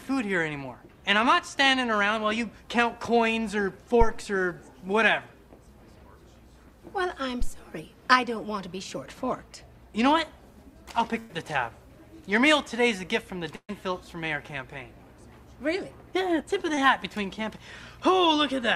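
At 4.01 to 4.17 s and again at 7.41 to 7.50 s there is a phantom power thump. A supply was switched on or off on a live input, and the voltage step passed through the coupling capacitors. Each is a deep thud, dying away within 35 ms and 20 ms.

At 11.19 to 11.31 s comes a burst of packet loss. About 100 ms of audio never arrived. The receiver stretched the last sound into the hole and faded it, then jumped ahead. A second burst at 13.55 to 13.71 s lost 140 ms. The fill fades until the final 70 ms are silence.

At 16.75 to 16.79 s there is a short concealed packet loss. Only 20 ms went missing. The decoder patched it by extending the preceding sound and blending back in, leaving a brief smear.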